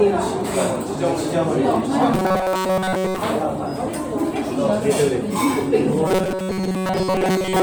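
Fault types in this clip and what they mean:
Robotic sound from repeated short buffers: new audio likely arrives too seldom, so playback keeps looping its last tiny chunk, about 5.3 ms long, while most of the real signal, roughly two-thirds of it, is skipped. That looping stamps a fixed 188 Hz buzz onto the sound, making it rigid and metallic while it still loosely follows the original shape, from 2.14 to 3.18 s and again from 6.08 s to the end.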